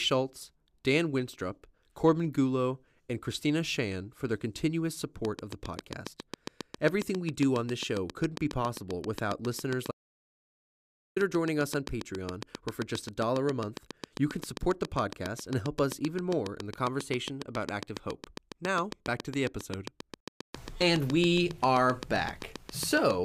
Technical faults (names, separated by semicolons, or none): train of clicks; audio dropout to silence